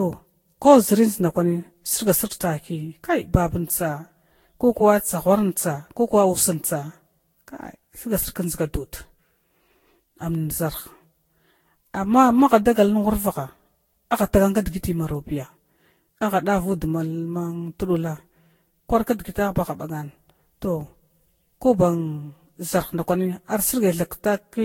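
Generation loss runs through the whole speech clip, likely from repeated lossy re-encoding, with a character that points to about ten passes through a Vorbis-type codec at roughly 62 to 65 kbit/s. Each new encode quantises the already damaged signal again on a shifted frame grid, so noise and spectral gaps pile up. The result sounds swirly, hollow and smeared, consonant attacks blur, and nothing remains above 16.6 kHz.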